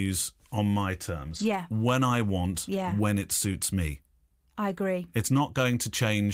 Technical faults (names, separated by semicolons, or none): lost packet rebuilt from error correction